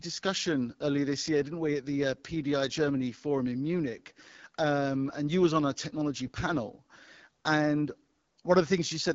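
Throughout the speech, the AMR wideband (HD Voice) codec is plainly audible. Nothing sounds above 7.6 kHz. The top band is filled with shaped noise. The voice turns rough and raspy, which fits one of the lowest AMR-WB rates, around 8.85 kbit/s.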